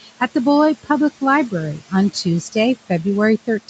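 Noise suppressor artifacts run through the whole clip. The suppressor pulls the steady room noise down by about 17 dB in each frame. That noise, about 15 dB below the speech, dips in the gaps and swells back under the voice.

Speech cut by the noise suppressor occurs twice. From 0.01 to 0.21 s, the suppressor mistakes quiet speech for noise and lowers it by up to about 14 dB. Roughly a tenth of a second sounds swallowed. From 2.13 to 2.56 s it happens again, with a drop of up to about 12 dB. Soft parts of the speech fade out faintly there.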